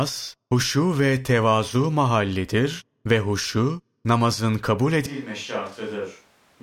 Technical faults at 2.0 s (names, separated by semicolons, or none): none